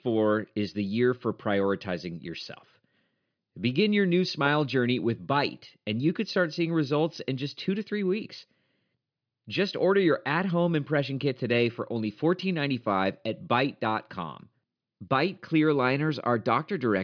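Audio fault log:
No faults are present: the speech signal is technically intact, with nothing audible that points to a problem in how it was captured, processed or played back.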